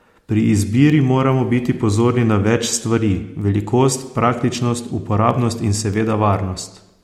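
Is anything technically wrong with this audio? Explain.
Yes. Word clock ticks occur from 0.27 to 6.57 s, roughly every 0.7 s: an unlocked receiver clock slips about 30 ppm, dropping or repeating single samples as sharp ticks.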